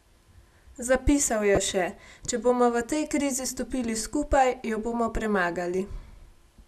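Speech with one corrupt frame decoded. At 1.55 to 1.58 s, a brief, loud burst cuts in, peaking near -10 dBFS. Its length fits a single damaged frame. Flipped bits in the compressed data made the decoder put energy at wrong frequencies.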